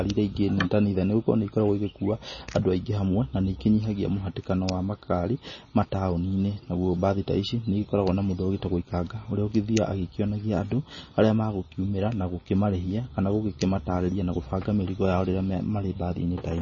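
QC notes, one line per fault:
Throughout, MP3 compression, likely: the speech has nothing above 7 kHz and carries heavy watery, swirling artefacts with chirpy s sounds, as weak frequency lines drop in and out between frames. The damage points to a very low bitrate, around 24 kbps.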